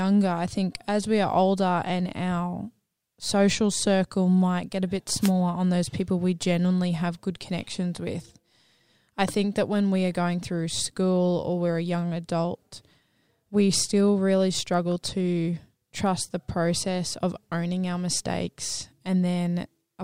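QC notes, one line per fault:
5.20 to 5.31 s, wireless microphone noise hit: right after "might get a bit" there's a short swish of static lasting about a tenth of a second, and it clears by "on those people we". That's the radio link from an analogue FM mic fading briefly, probably reflections cancelling the signal at the receiver, so the receiver's own noise rises until the signal comes back.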